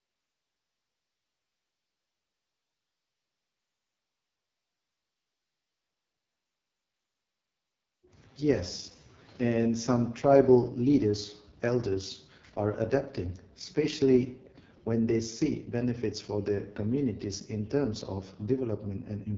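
From start to finish the speech sounds rough and raspy, with a buzzy, grainy edge and nothing above about 7.4 kHz. This is heavy AMR wideband (HD Voice) codec damage. The rough, raspy sound points to its lowest rate, around 6.6 kbit/s.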